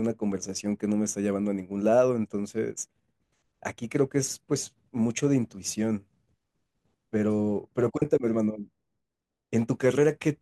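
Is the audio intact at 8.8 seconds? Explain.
Yes, the audio is intact at 8.8 seconds: the speech carries through that moment with no audible fault.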